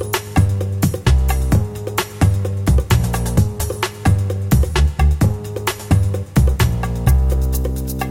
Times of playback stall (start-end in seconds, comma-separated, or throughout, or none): none